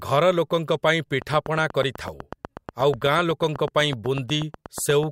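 A train of clicks runs through this speech recording from 1.22 s to 5.04 s: about thirty near-identical pulses at a steady 8.1 per second, peaking roughly 10 dB above the speech and audible in the pauses too. The even spacing and uniform shape set it apart from vinyl-style crackle, whose clicks are random in timing and size. The likely cause is interference from nearby equipment or a faulty connection or power supply.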